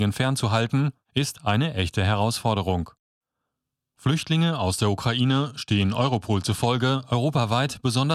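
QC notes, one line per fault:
5.23–6.66 s, Bluetooth SBC bit pool drop: just after "aus der" the treble dulls and gritty noise rises, which points to the bit pool falling from about 28 to 13 (near 102 kbps), starving upper sub-bands. Unlike dropouts, the speech never breaks off. It then recovers.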